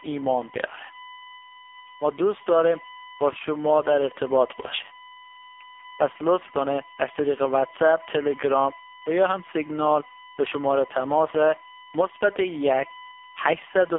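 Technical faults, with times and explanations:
throughout USB whine: a steady 1 kHz tone sits roughly 20 dB under the speech, leaking from the USB bus's 1 ms frame timing, unlike low mains hum.
throughout AMR narrowband mobile codec: speech confined to 300 Hz to 3.5 kHz, nothing above 3.6 kHz, and heavily buzzy and synthetic, which points to AMR-NB's low 5.15 kbps bitrate, not mere filtering.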